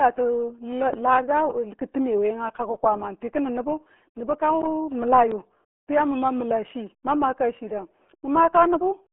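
From the first moment the speech carries the RealAudio 14.4 codec sound: narrow, muffled and gargly, with nothing above about 3.8 kHz and little below 250 Hz. That heavy smearing of the voice fits a coder squeezed to about 8 kbit/s for dial-up modems. Plain telephone band-limiting would sound thin but clean. Here the bubbling, gargly texture on every syllable shows that a low-rate codec damaged the signal, not just a filter.

At 0.93 s a phantom power thump breaks in and lasts until 1.03 s. A supply switched on or off on a live input sent a voltage step through the coupling capacitors, and it comes out as a deep, dull bump that dies away within about 21 ms. A handling knock or plosive pop would follow the sound or the mic's movement. This thump is a single low-frequency thud with nothing around it to explain it.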